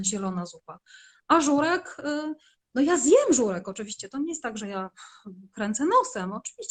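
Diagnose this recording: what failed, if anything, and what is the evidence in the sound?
Nothing in the signal chain seems to have failed here, as there's no audible evidence of anything going wrong at any stage.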